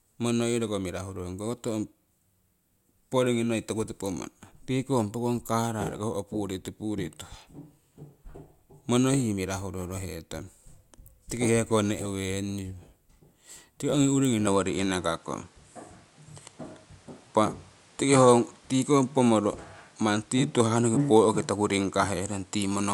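At 14.47 s the speech abruptly loses its top end, with nothing above 11.4 kHz through to the end. There is no gap at the change. The level shifts by about 5 dB, and a new noise floor appears about 35 dB down. This likely means the input switched to a poorer device.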